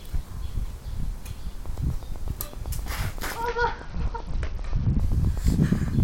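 From 1.66 s to 6.01 s a train of clicks ticks steadily at 7.8 per second, roughly forty similar pulses peaking about 5 dB above the sound. That is likely interference, and the even spacing sets it apart from random crackle.

Between 3.43 s and 5.00 s a Bluetooth SBC bit pool drop dulls the treble and adds a gritty noise, which fits the bit pool falling from 28 to 8 at about 72 kbps. Unlike a clean low-pass filter, the grit reveals coarse quantisation.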